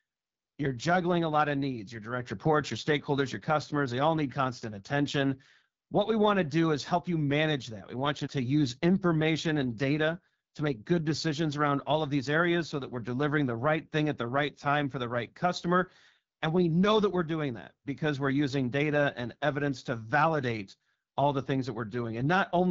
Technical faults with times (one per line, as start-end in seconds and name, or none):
0.00-22.70 AMR wideband (HD Voice) codec